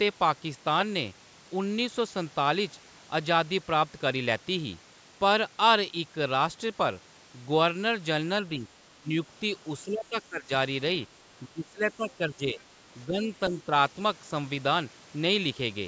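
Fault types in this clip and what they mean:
Speech suppressed in double talk: at 8.59–8.65, 8.98–9.09, 9.85–10.5, 11.47–12.6, 13.07–13.3 and 13.49–13.71 s the speech dips in level, by as much as about 20 dB at its deepest. The likely cause is an echo canceller that mistook the talker for loudspeaker echo while both sides spoke at once.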